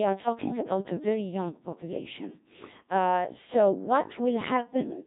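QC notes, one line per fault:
Throughout: Codec 2 vocoder. The speech comes out robotic and buzzy because the original waveform isn't kept at all. Only pitch, voicing, energy and a rough spectral envelope survive, and the decoder rebuilds the voice from sine waves. The damage is heavy, which fits the 1.3 kbit/s mode, and there's nothing above about 3.8 kHz, so the top end is gone and everything sounds narrow and synthetic.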